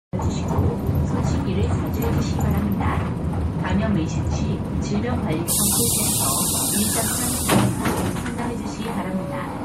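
Throughout the clip, the encoder likely ran short of bits, as lossy MP3 compression at a low bitrate near 64 kbps would, so weak frequency detail flickers in and out, giving a plainly audible watery, swirling texture with smeared attacks.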